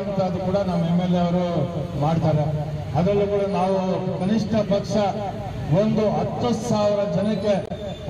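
Damaged data in a compressed stream appears from 7.64 to 7.71 s, near the end. Corrupted bytes make the decoder misread those frames and lose sync while it hunts for the next valid frame header, producing a short disturbance, a chirp, squawk, click or brief hole, lasting about 70 ms.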